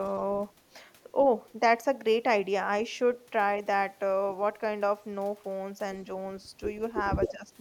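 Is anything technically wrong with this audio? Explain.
Yes. From 0.05 to 0.21 s a very faint delayed copy of the speech trails it by about 119 ms, far below the main level. This is likely an echo leak: a far-end loudspeaker's sound slipped past its echo canceller and returned.

From 7.29 to 7.51 s the speech sinks by about 15 dB in patches totalling around a fifth of a second. The likely cause is speech suppressed in double talk: with both sides talking, the echo canceller mistook the talker for echo and attenuated it.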